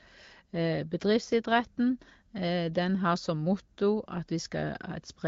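No faults are audible in the speech, which comes through an AMR wideband (HD Voice) path at 15.85 kbit/s, a rate where that codec leaves only light coding traces.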